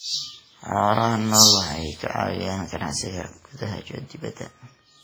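Throughout the speech, ringing, washy smearing and hiss that breathes with the voice point to likely heavy WMA compression at a low bitrate near 24 kbps; unlike packet loss, nothing drops out.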